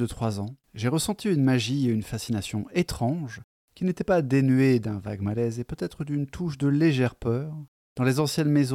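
Speech recording with no audible technical fault at any point in the signal.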